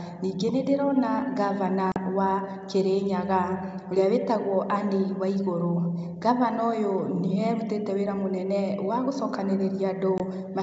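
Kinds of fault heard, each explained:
Packet loss on an ADPCM call: two abrupt silent holes, 40 and 20 ms long, after which the sound returns briefly slightly distorted while the decoder's predictor resynchronises with the sender's.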